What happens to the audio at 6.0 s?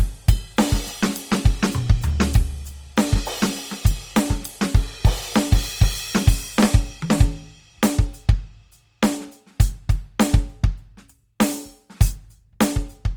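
At 6.0 s the music carries the same damage heard from start to finish: tones sound rough, grainy and noisy, with a hiss-like texture riding on sustained pitches. This is likely Opus compression in its music (CELT) mode, at a rate that fits roughly 24 kbps. Short of bits, the encoder keeps each band's energy but fills the detail with folded or noise content. On a spectrogram the bands stay filled, without MP3-style holes, but harmonics look smeared and speckled, and the top edge sits near 20.3 kHz.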